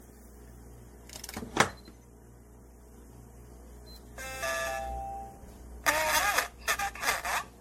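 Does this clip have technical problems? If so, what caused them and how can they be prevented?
Yes. Throughout, the sound is swirly and hollow with smeared attacks, likely generation loss from about seven MP3 passes near 62 kbit/s. A spectrogram shows a hard ceiling at 16.5 kHz and patchy holes. Prevent it by editing from a lossless master and encoding only once.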